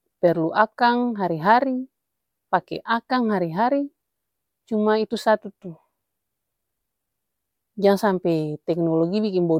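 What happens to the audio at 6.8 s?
Nothing goes wrong at 6.8 s; the speech continues intact through that moment, with no dropout, click or distortion.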